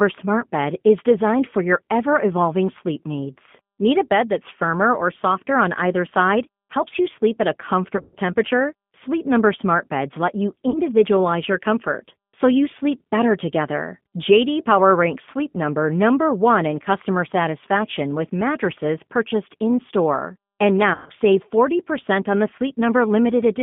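Throughout, the speech passes through a G.729 codec at 8 kbit/s, rebuilding each 10 ms frame from a vocal tract model and a few pulses within a line band of about 150 Hz to 3.5 kHz. The result is plainly rough, synthetic and band-limited.

From 3.33 to 4.62 s, a loudspeaker feedback squeal appears: the microphone picks up its own loudspeaker output, and at 4 kHz the loop gain exceeds unity, so that frequency re-amplifies itself. That tone swells over roughly a second to about the level of the speech itself.

VoIP packet loss concealed by the speech codec hits three times. At 7.97 to 8.15 s and again at 20.94 to 21.12 s, 140 ms goes missing within 160 ms, with a longest gap of 120 ms, which fits seven lost 20 ms packets. At 10.70 to 10.80 s, 40 ms is lost. Each time the decoder extends its last pitch and filter at falling gain, so the sound smears into a buzzy, fading tone, and the weakness persists briefly after packets resume.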